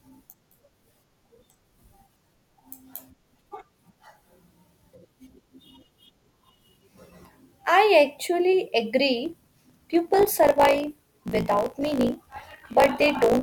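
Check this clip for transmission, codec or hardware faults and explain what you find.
One fault is present: a block size mismatch (truncated), from 9.24 s to the end of the clip. From that point one stage writes longer blocks than the next stage reads, and the tail of each block is dropped. The buzz at 54.4 Hz points to 1024-sample blocks being cut short. Because every block loses its end, the speech runs 1.16 times faster but keeps roughly its normal pitch, with a steady buzz at 54.4 Hz laid over it.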